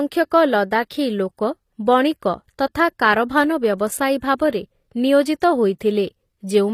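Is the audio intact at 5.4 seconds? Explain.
No. At 5.40 s a pre-echo lasting about 16 ms occurs: the codec spread quantisation noise across a transform block, so noise meant for a sharp attack fills the quiet instant before it. You hear a brief hiss just ahead of the onset, which sounds softened and smeared.

Throughout this speech clip, the treble has a gritty, metallic, lispy quality on sibilants, and upper harmonics don't line up with the lower spectrum. This is likely HE-AAC compression rebuilding the highs by spectral band replication, at a low bitrate around 24 kbps.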